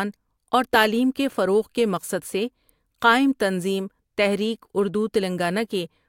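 No technical fault can be heard anywhere in the recording, and the signal holds steady throughout.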